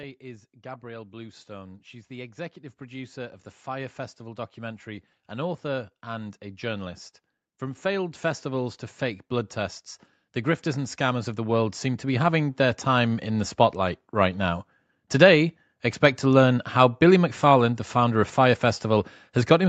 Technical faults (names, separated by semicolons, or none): automatic gain rising